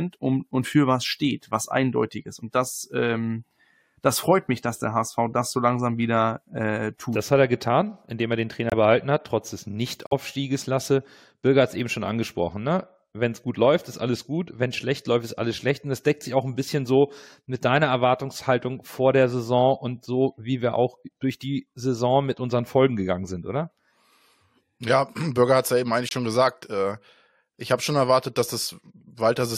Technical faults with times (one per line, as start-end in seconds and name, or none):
8.70-8.73 corrupt frame muted
10.07-10.13 corrupt frame muted
26.09-26.13 corrupt frame muted